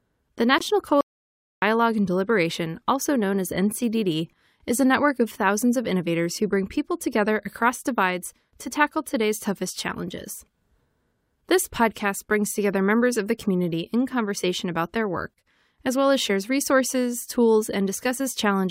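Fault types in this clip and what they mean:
Corrupt frame muted: At 0.58 to 0.62 s the speech drops into a sudden hole about 38 ms long, the span of one compressed frame. The decoder rejected that damaged frame, and the player filled its slot with silence, so timing stays intact.
Audio dropout to silence: From 1.01 to 1.62 s the speech cuts out mid-flow into silence with no room tone, about 0.61 s lost. This is likely the input signal disappearing while the recorder kept writing silence, erasing whatever was spoken there.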